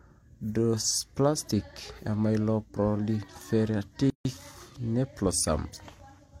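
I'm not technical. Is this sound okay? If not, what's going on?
No. At 4.10 s there is a gap at a join of encoded pieces. The speech falls silent for 150 milliseconds, then resumes exactly where it stopped, with nothing lost, unlike a dropout.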